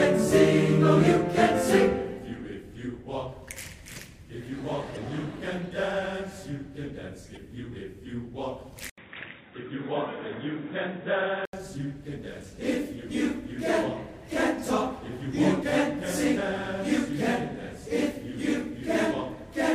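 At 8.90 s the sound drops out for about 80 ms, then returns dull and boxy, with nothing above 3.8 kHz, and stays that way until 11.53 s. The level holds steady, but a new faint background noise appears about 40 dB below the signal. This is likely an input switched to a poorer device. A codec bandwidth drop would narrow the band without the brief gap at the switch or the change in noise floor.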